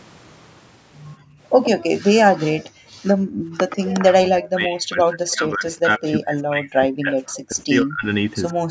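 Background gated by the echo canceller, 1.16 to 1.4 s: while the far side plays through the loudspeaker, the canceller clamps the microphone, and the room sound drops by about 34 dB for roughly 0.2 s before returning.

Echo leak, 1.63 to 1.7 s: a copy of the speech arrives 121 ms late, about 10 dB below it, likely residual loudspeaker echo the canceller failed to remove.

Background gated again, 2.62 to 3.57 s: the room tone dips by up to about 40 dB in stretches totalling roughly 0.7 s.

Echo leak, 3.69 to 3.9 s: the same 121 ms delayed copy, now about 15 dB down.

Speech suppressed in double talk, 4.01 to 8.06 s: the talker's speech sinks by as much as about 40 dB, in pieces adding up to around 3 s. The likely cause is the canceller mistaking overlapping talk for echo and turning both down.

Echo leak, 7.34 to 7.41 s: a brief scrap delayed 137 ms, about 20 dB below the speech.

Speech suppressed in double talk, 8.56 s to the end: a final dip of about 30 dB lasting roughly 0.15 s.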